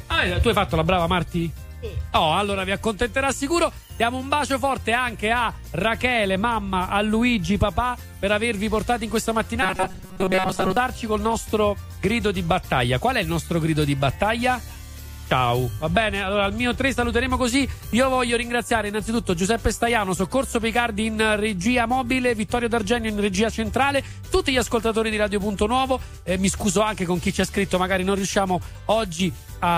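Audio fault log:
9.63 to 10.77 s, robotic sound from repeated short buffers: the sound turns into a rigid, metallic buzz pitched at 188 Hz that only loosely tracks what was there before. The likely cause is new audio arriving too seldom, so the playback repeats its last slice of roughly 5.3 ms, matching one cycle of that buzz, while the real material is skipped. Those repeats fill most of the stretch and impose a buzz at that fixed rate.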